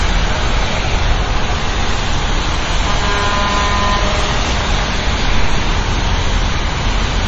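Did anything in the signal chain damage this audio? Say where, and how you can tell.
Yes, at the codec stage. The whole clip has a hard ceiling with nothing above 8.2 kHz, plus a watery, swirly texture and smeared attacks. That's heavy MP3 compression, likely at a starved bitrate around 32 kbps, cutting treble and switching weak frequency lines on and off between frames.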